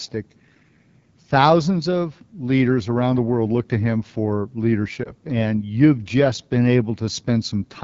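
Throughout, the AMR wideband (HD Voice) codec runs at a low rate, plainly audible as rough, raspy speech, which fits roughly 8.85 kbit/s. At 5.04 to 5.11 s, a radio error caused a lost AMR speech frame. The decoder patched it from earlier pitch settings, leaving a brief dip or warble consistent with one 20 ms frame.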